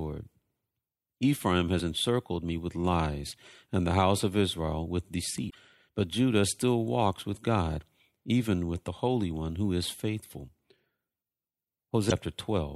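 At 5.47 to 5.55 s the speech briefly breaks up, and at 12.07 to 12.12 s a briefer break of the same kind cuts in. Both are damaged data in a compressed stream: corrupted bytes left the decoder unable to read those frames, so it lost sync, produced garbage until it found the next valid frame header, and resumed from there.

At 8.88 s there is a small jump forward in the speech, roughly a fiftieth of a second missing and no gap of silence in its place. This is likely a dropped buffer (overrun). The recording software did not collect a block of samples in time, the hardware overwrote it, and the audio on either side of the lost block was butted together.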